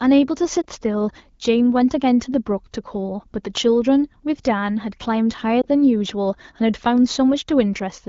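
At 0.61 to 0.65 s and again at 5.62 to 5.66 s, lost AMR speech frames cause brief dips or warbles. Each sounds like one 20 ms frame concealed from the previous one with falling gain.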